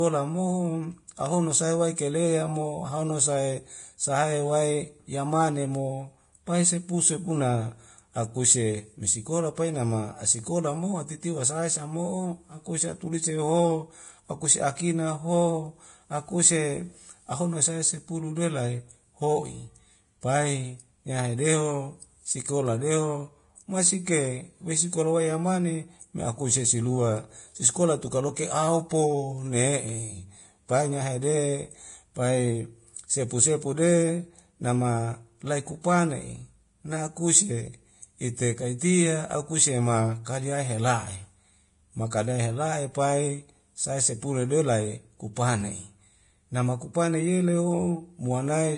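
The whole speech track sounds hissy and grainy, with nothing above 10.5 kHz. That's heavy Vorbis compression, likely at a low bitrate around 30 kbps. Pre-echo shows up at 1.96 to 1.98 s and again at 42.10 s: the codec's block noise smears a short hiss just ahead of sharp attacks, softening them.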